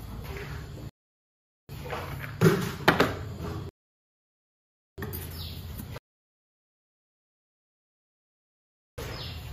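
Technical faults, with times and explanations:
0.89–1.69 s, 3.69–4.98 s and 5.98–8.98 s, rebuffering stalls: the player runs dry and falls silent for 0.8, 1.29 and 3.0 s, then picks up exactly where it stopped.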